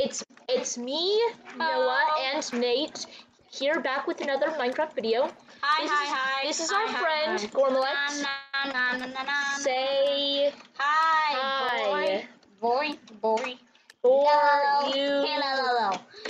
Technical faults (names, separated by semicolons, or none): call audio freeze; skip ahead; jitter buffer slow-down; block of digital silence; jitter buffer speed-up